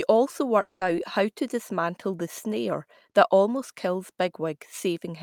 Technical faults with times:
0.61-0.83 long network dropout

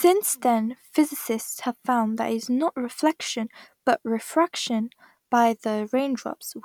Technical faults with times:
none

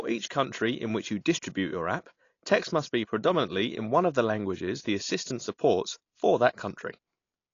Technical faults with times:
0.00-7.54 AAC compression

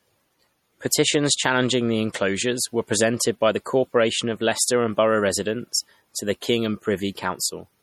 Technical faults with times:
0.00-7.82 MP3 compression

